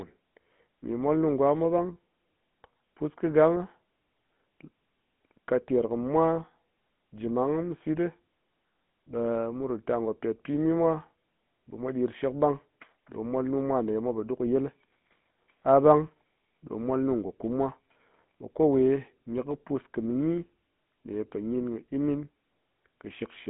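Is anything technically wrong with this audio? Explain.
Yes. Throughout the speech, the voice has a buzzy, gravelly roughness and a narrow telephone-band tone, roughly 150 Hz to 3.6 kHz, with nothing above 3.8 kHz. This is the GSM full-rate codec, consistent with a 13 kbps rate. It rebuilds the voice from a vocal-tract model driven by regularly spaced pulses and keeps only every third excitation sample. That coarse excitation causes the grating buzz, and the missing upper band leaves the sound dull and boxy.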